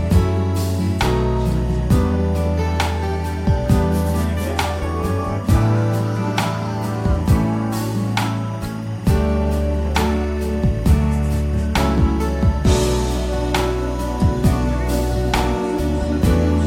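Running the whole way through, there's timecode bleed: a steady chirping warble sitting roughly 30 dB under the sound, flipping between tones around 1 kHz and 2 kHz. Its rhythm fits 24-frames-per-second linear timecode leaking in from a neighbouring track or cable.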